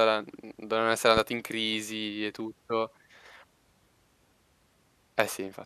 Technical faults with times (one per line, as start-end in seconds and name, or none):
1.17-1.20 loud pop